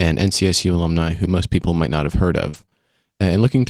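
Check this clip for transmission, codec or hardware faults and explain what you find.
Two transmission faults are audible, both from packet loss on the network path.

At 1.05 s there is a single lost packet rebuilt from error correction. The packet that followed carried a low-bitrate backup copy of the missing one, and the decoder played that copy in its place, so there is no dropout. The 20 ms of reconstructed speech is coarser and noisier than the surrounding audio, a short grainy blip rather than a hole.

From 2.49 to 2.73 s there is repeated packet loss with a robotic sound. Four separate holes occur in this 240 ms span, the longest about 40 ms. The decoder patched each hole by extending the preceding waveform, covering about 100 ms in total, or 42% of the span. Another 100 ms is simply missing. Because the gaps recur so quickly, the speech turns choppy, with fragments dropping out.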